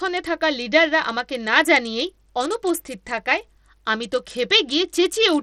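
From start to finish the speech carries plainly audible codec damage, likely Bluetooth SBC compression at a small bit pool, consistent with roughly 80 kbps. The coarse sub-band coding starves the upper bands of bits, so the treble thins out and flickers while a gritty, grainy noise and aliasing sit on the voice. On a spectrogram the top region shows ragged, blocky holes that blink on and off, with broadband hash smeared between harmonics.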